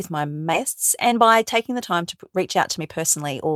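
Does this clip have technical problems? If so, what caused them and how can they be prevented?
Yes. At 0.53 to 0.55 s the speech jumps forward with no gap, as if roughly 0.4 s vanished. This is a skip ahead: a queued stretch of audio was dropped, in transit or by an overflowing jitter buffer, and the two sides were spliced together directly, cutting delay by roughly that amount. Sizing the buffer to absorb bursts and shrinking it gradually would prevent it.

From 1.07 to 3.34 s the speech sounds hurried, running at about 108% speed with its pitch unchanged. This is a jitter buffer speed-up: the buffer held too much audio and repeatedly removed pitch-period-sized pieces, roughly a fifth of a second in total. Steadier packet delivery, or a gentler catch-up rate, would prevent it.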